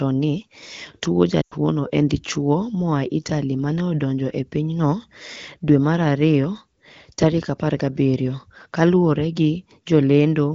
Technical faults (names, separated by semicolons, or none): lost AMR speech frames